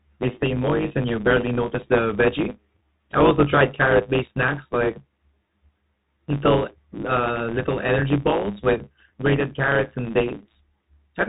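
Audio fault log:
throughout: block size mismatch (truncated). A steady 109 Hz buzz from discarded block ends. The speech runs 1.09 times fast, yet its pitch stays about normal, unlike a simple resampling speed-up.
throughout: Bluetooth CVSD headset codec. Nothing passes above 3.8 kHz. Unlike a plain low-pass, the damage is plainly audible: scratchy s sounds, a granular hiss, and loud highs distorting as the one-bit steps lag.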